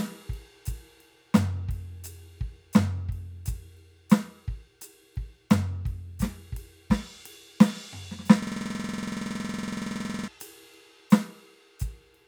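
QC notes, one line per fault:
8.42–10.28 s, system hang loop: the music freezes into one 46 ms fragment repeated about forty times, a rough buzzing stutter at 21.5 Hz. The system stalled while the audio hardware kept replaying its ring buffer, which fits a 2048-sample buffer.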